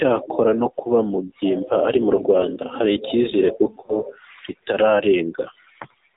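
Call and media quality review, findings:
AMR narrowband mobile codec, whole clip. Speech band-limited at 4 kHz, no content above. Buzzy, synthetic timbre from the pulse-driven vocal-tract model running short of bits. Degradation plainly audible, consistent with a low AMR-NB mode around 7.4 kbps.

Lost AMR speech frames, 2.16–2.21 s, after "ari mu". Brief warble and level dip. Decoder concealed one bad frame by reusing the last good pitch and vocal-tract settings at reduced gain. Sounds like about 20 ms missing.

Lost AMR speech frames, 3.86–3.94 s, after "hari icyizere kuko". Same signature: short smeared dip, then rough onset as the decoder recovers. Fits a single dropped 20 ms frame failing its checksum over the radio link.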